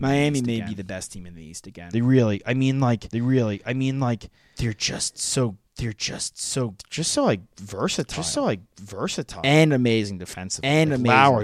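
Throughout the clip a doubled audio track runs underneath: the whole speech signal recurs about a second later, roughly 5 dB quieter. Unlike an echo or reverb, the copy is full-band with no decay or room colour, likely from a second, slower capture path.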